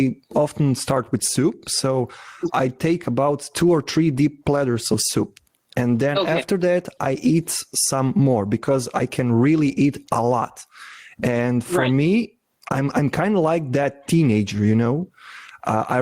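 Gain pumping runs through the whole speech clip. The gain is pulled down on every loud sound. The level swings by something like 15 dB. Loud and quiet parts sit squashed together. The likely cause is input gain set far too high, with a fast limiter clamping down.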